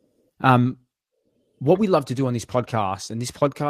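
Nothing goes wrong anywhere in this bit of speech, so there's no fault to point out.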